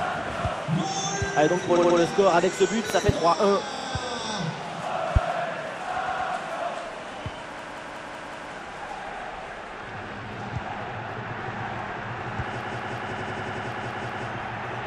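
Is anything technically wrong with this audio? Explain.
Yes, there are three kinds of fault.

Repeated frames: at 1.76 to 1.97 s, 3.75 to 3.84 s, 6.05 to 6.28 s and 13.11 to 13.67 s, a short slice of sound plays again and again, giving a stutter. The slice is about 70 ms replayed three extra times, then 46 ms twice, 116 ms twice, and 93 ms six times. This fits a run of compressed frames being sent or written more than once, which lengthens the audio by roughly 0.21, 0.09, 0.23 and 0.56 s.

Loud pop: between 2.90 and 3.12 s, two sharp pops land on top of the sound, peaking about 20 dB above it while the audio carries on underneath. The likely cause is a sudden voltage step or pulse entering the signal chain, such as a plug, a switch, static or a driver glitch, which the following circuits shape into a brief thump.

System hang loop: from 7.59 to 8.52 s and from 12.61 to 14.28 s, one fragment of about 186 ms repeats exactly, five times and then six times. 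At 5.38 repeats per second, this makes a machine-gun stutter. The software froze while the sound hardware kept cycling through the same ring buffer, and the loop length fits an 8192-sample buffer. The second loop overlaps the last repeated-frames stutter.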